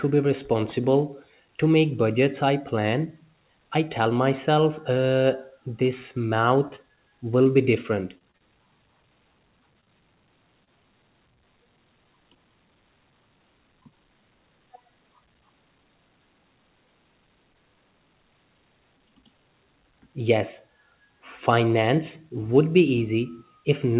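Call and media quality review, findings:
Repeated packet loss (robotic sound), 6.68–6.99 s: choppy stretch. Four gaps up to 20 ms, about a fifth of the span synthesised. Jitter buffer/PLC: successive late or lost packets patched by extending the previous sound. 8.18–8.43 s, right after "be different": same symptom. Four gaps, longest 31 ms, roughly a third of the span concealed. Narrowband audio, nothing above 4 kHz, consistent with G.711 A-law.

Short concealed packet loss, 7.43–7.49 s, just before "be different": brief smear. 20 ms missing, repaired by continuing the prior waveform and adding a few milliseconds. 9.81–9.88 s: two back-to-back 20 ms losses, audible wobble. 10.64–10.69 s: single 20 ms loss, smear. Decoder PLC extrapolating pitch or noise, then crossfading into received audio.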